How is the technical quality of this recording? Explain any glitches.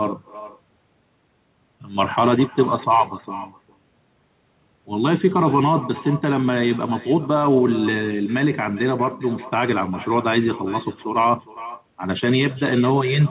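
The recording is speech carried over a narrowband telephone path with nothing above 4 kHz, and one fault runs through the whole clip.

Echo with no canceller, throughout: the far end played the call on a loudspeaker, its microphone picked it up, and nothing cancelled it before it returned. Each phrase is shadowed roughly 0.4 s later by a thinner copy about 19 dB quieter.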